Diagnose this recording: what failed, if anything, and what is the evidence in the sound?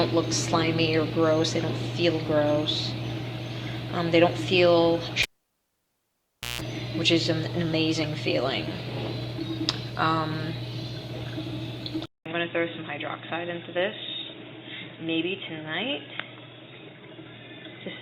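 The analogue wiring shows a cable pulled and plugged in between 5.22 and 6.61 s. A pop marks the break at 5.22 s, followed by about 1.34 s of near silence while the connector is out. A 0.16 s burst of 60 Hz mains buzz follows as the tip touches before the sleeve seats, leaving the input unshielded. A second pop occurs at 6.61 s as the circuit closes and the sound returns.

At 12.06 s a 0.2 s silence occurs, after which the sound stays different to the end. The band narrows, so the tone turns dull and boxy. The level drops by a few decibels, and a faint new background noise sits well under the signal. This fits an input switched to a poorer device at the driver stage, likely a changeover to another microphone or a headset's narrowband call profile.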